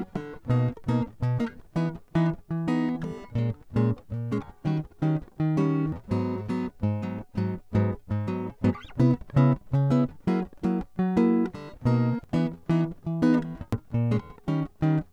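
At 5.92 s the music lurches forward, losing roughly a fifth of a second. Larger jumps follow at 12.24 s and 13.73 s, each dropping around 0.7 s. These are compressed frames skipped: whole coded frames never reached playback, either missing or rejected as corrupt. Each frame is about 93 ms long, which is a long frame.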